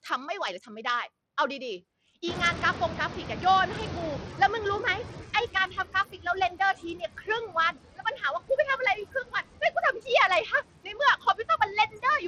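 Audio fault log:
Throughout: noise suppressor artifacts. The background is pulled down by about 17 dB, frame by frame in each band judged to be steady noise. The residue between phrases sinks and swells.
Throughout: Bluetooth SBC compression, likely. Nothing is present above 14.4 kHz, and the upper range flickers in and out while a gritty, aliased grain rides on the speech. This fits coarse sub-band quantisation with too few bits for the top bands, around 80 kbps.
2.27–5.93 s: noise suppressor catching up. Around 2.5 s the room noise rises by about 23 dB, settling about 11 dB below the speech. The suppressor's noise estimate lags, so the louder noise first passes through with less reduction. It then fades over roughly 3.66 s as the estimate adapts, reaching about 15 dB of reduction.
5.54–8.58 s, 8.95–10.07 s, 10.84–12.23 s: speech cut by the noise suppressor. Parts of the speech are mistaken for noise and ducked by up to about 17 dB, 17 dB and 16 dB respectively. 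In total about a second, a third of a second and under half a second are affected. Soft consonants and word tails sound swallowed or faint.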